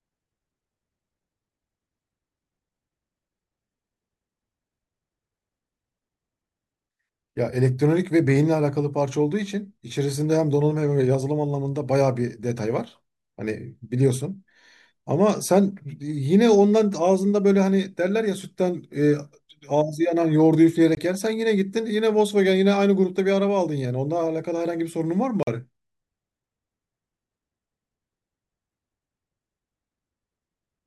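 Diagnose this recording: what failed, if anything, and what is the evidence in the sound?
Blocks of digital silence at 20.95–20.97 s and 25.43–25.47 s cut this speech out for about 21 ms and 43 ms. Each gap starts and ends abruptly. The failure is at the driver or buffer stage: the audio path missed its deadline and zeros went out instead. The lengths, one double the other, fit a 1024-sample buffer underrunning once and then twice in a row.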